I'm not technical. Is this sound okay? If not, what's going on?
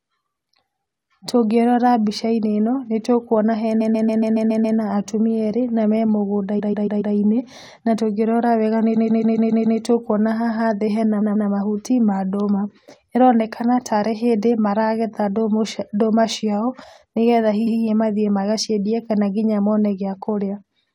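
No. This speech has repeated frames: small chunks of the stored audio were played over again, so a slice of roughly 0.12–0.14 s stutters at 3.80–4.77, 6.58–7.14, 8.95–9.79, 11.20–11.48 and 17.66–17.78 s.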